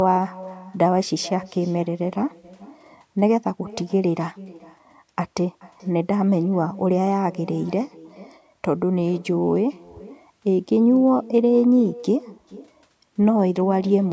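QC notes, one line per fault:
Throughout, echo with no canceller: far-end loudspeaker leaks into its microphone unremoved; speech returns roughly 0.4 s later, about 21 dB down, thin.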